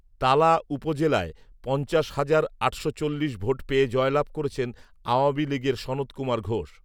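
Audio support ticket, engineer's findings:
No audible faults found.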